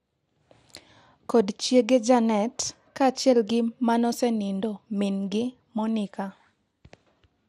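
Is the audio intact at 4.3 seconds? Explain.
No, at 4.3 s the speech carries MP2 compression artefacts, present throughout: dull, gurgling and granular, likely from a low Layer II bitrate near 80 kbps. A spectrogram shows upper sub-bands flickering on and off.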